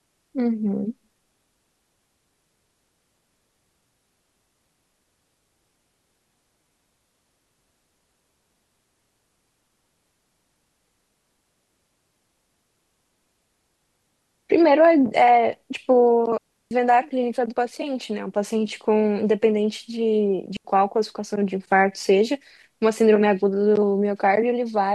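At 16.38 s the speech cuts to near silence for about 330 ms, then again at 20.57 s for about 83 ms. Both are digital wireless dropouts: the receiver lost too much data and muted with a very short fade, leaving clean holes with no noise burst.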